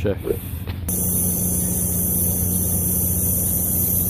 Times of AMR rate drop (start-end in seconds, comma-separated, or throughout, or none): none